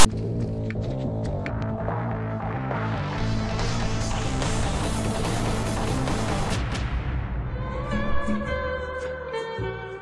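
The audio opens with file tags played as audio, from 0.00 to 0.06 s. A block of text tags is read as samples. It comes out as a loud rasp offset to one side, then brief silence from the zero padding. The burst has hard edges.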